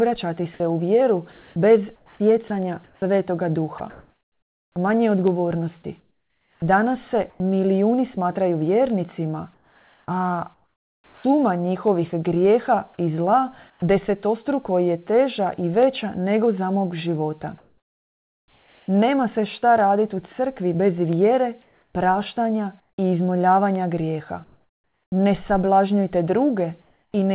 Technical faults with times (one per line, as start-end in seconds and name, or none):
0.58-7.40 sound chopped by the voice detector
9.54-11.24 sound chopped by the voice detector
12.94-13.82 sound chopped by the voice detector
17.58-18.88 comfort noise in place of the background
21.62-22.98 comfort noise in place of the background
24.44-25.12 comfort noise in place of the background
26.82-27.14 comfort noise in place of the background
27.12 onset clipped by the voice detector